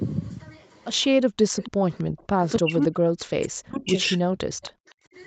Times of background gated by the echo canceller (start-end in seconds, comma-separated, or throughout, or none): 1.26-1.46, 4.85-5.14